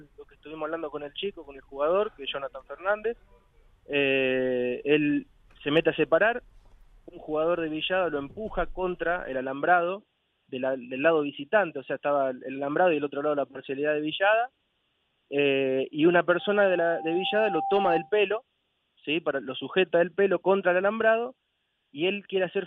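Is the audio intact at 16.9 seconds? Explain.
No. A pure 786 Hz tone swells over about a second and a half into a loudspeaker feedback squeal from 16.39 to 18.13 s. The microphone is re-amplifying its own loudspeaker with loop gain above one.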